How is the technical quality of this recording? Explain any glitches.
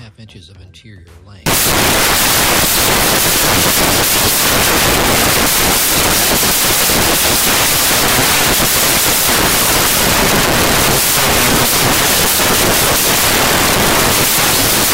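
The technical quality is poor: from 1.46 s to the end, the audio collapses into loud, hissing noise that is close to white on the loud passages. These are samples built from the wrong bytes. The bytes of each sample are being assembled out of order or misaligned by a byte, so the rapidly fluctuating low-order bits land in the most significant position and swamp the real signal with broadband noise.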